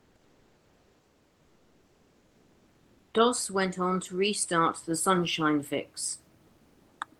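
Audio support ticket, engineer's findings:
Comfort noise in place of the background, 0.00–3.07 s: likely Opus DTX pausing transmission; receiver fills with steady, featureless synthetic noise about 2 dB below the room background.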